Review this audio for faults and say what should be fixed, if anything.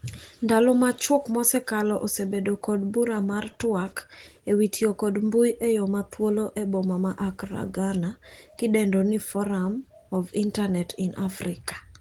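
Nothing here needs fixing; no faults were found.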